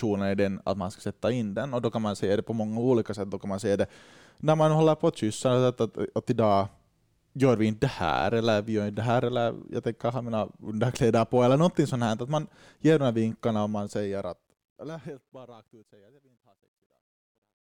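A fade-out stage appears to keep too few bits without dither, which fits 12-bit truncation. The result is truncation distortion on a fade from 13.63 s, after "ger de här vinkarna", to 17.76 s. Speech turns gritty, and is at its worst from 15.81 s.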